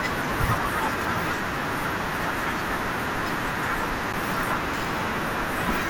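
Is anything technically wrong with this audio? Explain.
Yes, there are two faults in this speech clip.

From 1.97 to 2.00 s there is DAB burbling. Uncorrected bit errors at roughly a tenth of a percent slipped into the MP2 data, putting short blips of noise into single sub-bands. It gives a few brief watery blips over the speech rather than a gap, which separates it from a dropout.

At 4.13 s there is a block of digital silence, about 11 ms long, which fits a 512-sample buffer left unfilled in time. The signal drops to zeros and returns with no fade, so it is heard as a tick or dip, unlike the blips of burbling.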